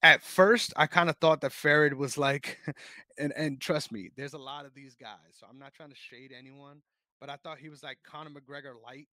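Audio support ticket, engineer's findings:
Zipper noise, 4.04–4.47 s, after "and and trust": roughly 20 dB level drop applied in unsmoothed steps near 100 per second, each step ticking. Likely per-buffer gain update without ramping.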